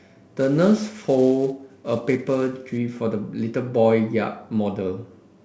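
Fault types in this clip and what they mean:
Sample clock jitter: the converter's timing wanders by something like 10 microseconds, so each sample lands slightly early or late, and the error grows with how fast the waveform moves. Through the first 2.78 s of this speech it adds a grainy hiss roughly 30 dB below the signal, strongest on loud and sibilant sounds. A spectrogram shows broadband noise that follows the speech energy, while the waveform looks fuzzed only on steep swings.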